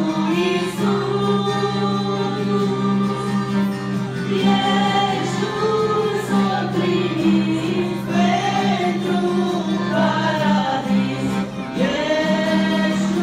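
Throughout the clip, the loudest peaks break into brief crackle, the sign of hard clipping. The sound was driven about 4 dB past what one stage could pass, so roughly 0.5% of samples were cut flat, adding high harmonics.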